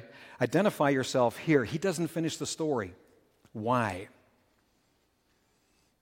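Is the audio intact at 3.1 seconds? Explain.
Yes, the audio is intact at 3.1 seconds, with the speech continuing through that moment without any dropout, click, distortion or other audible fault.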